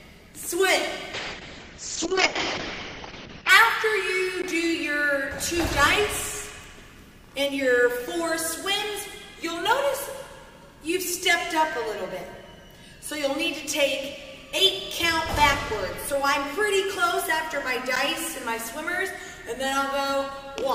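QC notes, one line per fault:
1.14–3.55 s, call bitrate drop: the call's bandwidth estimate collapsed and the encoder was pushed from 96 kbps down to 6 kbps, staying at the floor for about 2.35 s. At that rate Opus quantises coarsely and narrows its audio band from 20 kHz to 8 kHz, so the sound turns muffled and watery, with a rough, smeared texture. On a spectrogram the energy above 8 kHz vanishes abruptly, the remaining bands look blotchy and quantised, and full bandwidth returns at recovery.
4.42 s and 17.96 s, block of digital silence: two short runs of samples were zeroed, about 15 ms and 10 ms, which points to the output buffer not being filled in time. The signal drops out and jumps back with no fade, so each gap is heard as a tick or small pop rather than a pause. The waveform shows a flat, silent line with steep edges, and the spectrogram shows a thin blank vertical slot.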